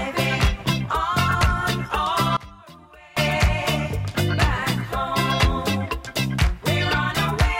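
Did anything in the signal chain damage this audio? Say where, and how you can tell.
Yes. From 2.37 to 3.17 s the sound drops by about 22 dB to a faint residue. This is most likely one channel inverted, a polarity flip in the wiring or channel handling, so the shared content cancels when summed to mono.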